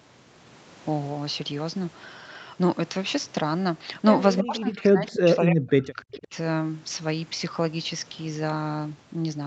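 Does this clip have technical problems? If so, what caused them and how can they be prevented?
Yes. From 4.37 to 4.41 s there is a brief echo leak: a short, delayed copy of the speech, trailing the original by about 305 ms and sitting roughly 10 dB below it. The likely cause is a far end playing the call through a loudspeaker while its echo canceller failed to fully subtract the returning signal, so a fragment of the talker's own voice came back. Preventing it means using a headset at the far end, or giving the echo canceller a stable loudspeaker-to-microphone path and enough convergence time.

From 4.42 to 6.34 s, about two seconds, the speech is pulled down in level, dropping by around 30 dB at its deepest point. This is speech suppressed in double talk, likely triggered by both sides talking at once. Unable to tell the local talker apart from loudspeaker echo, the echo canceller's suppressor attenuated everything it picked up. 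Preventing it means using headsets to remove the echo path, or a canceller with better double-talk detection and less aggressive residual suppression.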